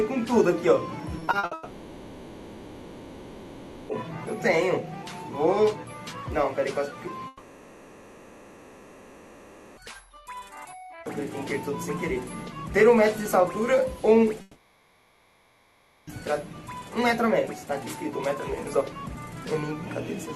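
From 1.19 to 1.53 s the sound turns choppy, with bits missing. This is repeated packet loss (robotic sound): five short gaps, the longest 60 ms, were each patched by extending the preceding audio. Nearly half that span is concealment.

Right after, from 1.53 to 3.91 s, the last sound is drawn out into a fading buzz that settles into low, steady noise rather than true silence. Audio then resumes with that stretch simply gone. The likely cause is a long network dropout, with the receiver filling the gap.

The same pattern returns from 7.27 to 9.79 s. A smeared buzz trails off into a faint noise floor, and the sound picks up again with those 2.5 seconds absent. This is most likely another long network dropout.

From 14.41 to 16.09 s there is a third drawn-out, decaying buzz over low noise, lasting about 1.7 s. The audio then comes back without that portion, likely a further long network dropout.

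Throughout, the top end stops around 12 kHz, consistent with Opus at roughly 32 kbps on the WebRTC call path.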